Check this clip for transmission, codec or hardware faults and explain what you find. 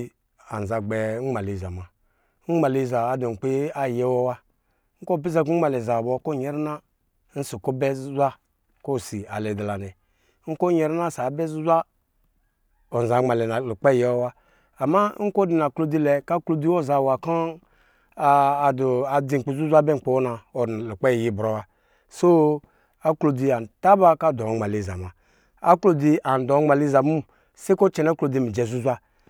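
No transmission, codec or hardware fault turns up anywhere in this speech recording.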